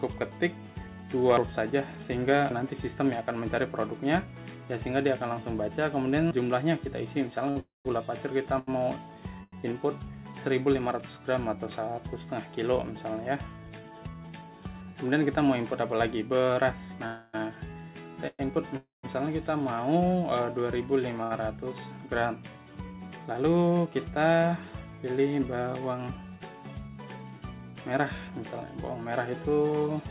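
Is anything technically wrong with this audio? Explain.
Yes. The audio, band-limited to nothing above 4 kHz as a G.711 mu-law call path leaves it, has several jitter-buffer faults.

Repeated stalls (stutter), 7.5 to 9.54 s: the jitter buffer ran empty three times, the longest gap about 91 ms. The last sound is extended each time, so the audio drags and stutters without losing content.

Call audio freeze, at 7.60 to 7.87 s, 17.06 to 17.35 s, 18.27 to 18.41 s and 18.77 to 19.05 s: the last sound is held as a fading buzz. The first and last freezes decay into about 160 ms of silence, the third into about 30 ms. Playback then resumes where it stopped, likely after packets were held up in transit.

Short stall from a late packet, 21.23 to 21.32 s: a packet missed its slot, and the last sound is stretched for about 70 ms with a slight buzz before the audio continues.

Jitter buffer speed-up, at 13.84 to 14.49 s (113% speed), 23.32 to 23.87 s (111%) and 29.19 to 30.02 s (109%): the receiver trimmed pitch-period slices to shed excess buffering, so the audio sounds hurried at unchanged pitch.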